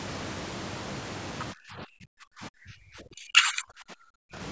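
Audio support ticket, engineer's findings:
Near-end speech pumps down and breaks into fragments from 1.53 s to 4.36 s, about three seconds in total, at worst about 35 dB lower. Likely speech suppressed in double talk: the echo canceller's suppressor could not tell the local talker from the loudspeaker echo during overlap and attenuated both. Band tops out at 8 kHz, consistent with 16 kHz call microphone processing, and is not a fault.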